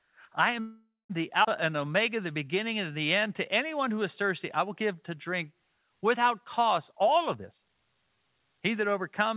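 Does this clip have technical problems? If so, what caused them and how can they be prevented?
Yes, there are a few. From 0.60 to 1.12 s there's a call audio freeze: the sound stretches into a fading fill for about half a second, including roughly 180 ms of silence, then resumes where it stopped. This was likely packets held up in transit until the jitter buffer ran dry. A more stable network path or a slightly deeper jitter buffer would help prevent it.

Right after that, at 1.44 to 1.46 s, there's a skip ahead. Roughly a fifth of a second of speech is gone, and the two sides are butted together with only a tiny fill. That stretch was dropped, either in transit or by the jitter buffer when it overflowed. Smoother packet delivery, so the buffer never overfills, would avoid it.

Then comes jitter buffer slow-down, from 1.61 to 3.27 s and again from 3.67 to 4.23 s, ending just before "I will give to". 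Speech runs at about 93% speed with the same pitch, as repeated pitch periods add 122 ms and 45 ms while the buffer rebuilds its reserve. Lower network jitter would make this stretching unnecessary.

Last, there's a jitter buffer speed-up from 6.93 to 8.68 s, just after "to drink without cost". Delivery runs at about 127% speed and sounds hurried, because around half a second was trimmed in small pitch-period chunks to cut the built-up delay. Steadier packet timing would prevent it.

The G.711 A-law call path itself is fine, with its expected cutoff at 4 kHz.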